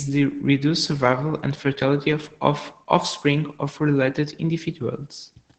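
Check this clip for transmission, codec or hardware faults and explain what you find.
One codec fault runs through the whole clip: Opus voice compression, at a level that is plainly audible. The speech has nothing above about 8.8 kHz, which fits the wideband setting of Opus's SILK linear-prediction coder at a bitrate around 12 kbps. At that rate the excitation is coded coarsely, so the voice sounds muffled, hoarse and faintly robotic throughout. A plain low-pass filter would dull the top end without adding that grainy, synthetic texture.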